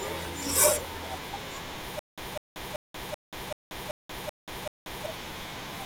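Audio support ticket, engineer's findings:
Stutter with silent gaps, 1.99 to 5.06 s. A 199 ms fragment of speech replays 8 times, each followed by 184 ms of digital silence (384 ms period). Likely a player or stream stall, each retry repeating the last buffered fragment. Intervening audio lost.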